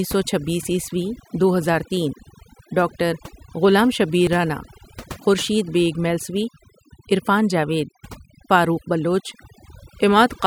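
Speech throughout, with overdone noise removal: a noise reducer set far too strong cuts bands near its noise estimate, leaving the background lowered and broken into twinkling specks.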